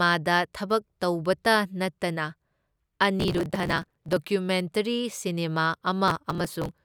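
A gritty crackling tears through the speech from 3.20 to 4.17 s and again from 6.08 to 6.71 s. This is processor overload crackle: the processor repeatedly missed deadlines for buffers of roughly 5 ms, skipping each one and leaving hard-edged gaps.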